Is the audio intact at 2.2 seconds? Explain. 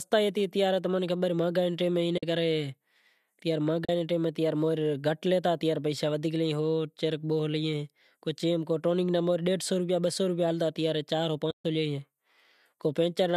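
No. Just after "نے ٹیم", AAC frame loss with muting leaves a soft-edged gap from 2.18 to 2.23 s. About 50 ms of audio was zeroed in the decoder. Overlapping windows fade it out and back in, likely with low-delay AAC frames.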